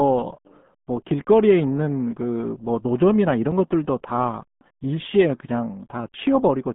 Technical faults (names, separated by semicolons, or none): RealAudio 14.4 codec